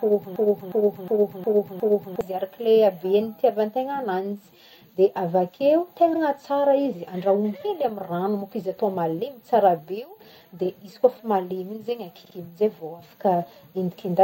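A stalled player or stream, the likely cause, kept resending its last fragment, producing a broken-record loop already under way at the start: a 0.36 s piece repeats exactly five times until 2.21 s, replacing the audio that should have played. Repeated frames follow, where a short run of compressed frames was resent. Just after "de avakeo", at 6.13 to 6.21 s, a 78 ms block plays one extra time, a brief stutter that lengthens the speech by 78 ms. At 12.24 to 12.34 s a 52 ms block plays twice more, adding about 0.1 s.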